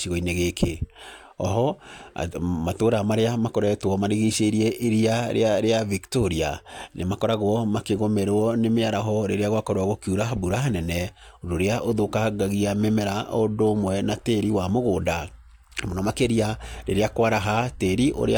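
No technical faults are audible anywhere in the speech recording.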